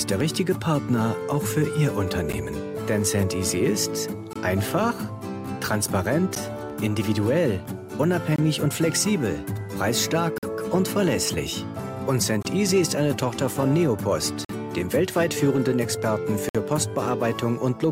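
Gaps between stream segments cut into the sound at 2.32 s, 4.33 to 4.36 s, 6.35 s, 8.36 to 8.38 s, 10.38 to 10.43 s, 12.43 to 12.45 s, 14.45 to 14.49 s and 16.49 to 16.55 s. They are hard-edged silences of 11, 23, 11, 24, 47, 24, 47 and 57 ms, spaced every 2 seconds to match the segment length. Each comes from timestamps on adjacent segments that don't quite meet, with the player filling the difference with silence. Unlike a packet dropout, nothing is missing: the sound resumes exactly where it stopped, just delayed.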